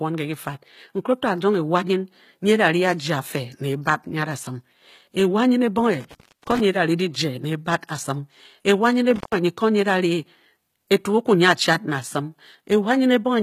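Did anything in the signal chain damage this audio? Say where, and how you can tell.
Yes. Throughout the clip, codec damage is plainly audible and nothing reaches above 14.9 kHz. That points to the codec stage, likely HE-AAC compression at a low bitrate, which fits roughly 20 kbps. The treble is rebuilt by copying lower bands upward under a coarse envelope, so its harmonics don't line up with the real ones.

The analogue wiring also shows two intermittent contact faults, from 6.01 to 6.60 s and from 9.16 to 9.36 s. The line opens for about 334 ms in the first and about 118 ms in the second. While it is open the sound drops out or breaks up, with crackle at each edge where the connection breaks and remakes.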